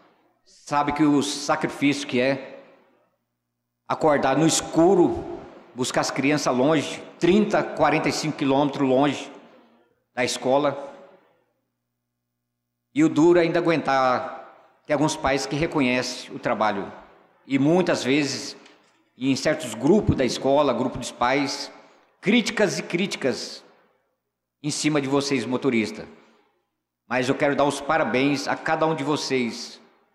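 No technical faults can be heard anywhere in the recording; the signal holds steady throughout with nothing interrupting or degrading it.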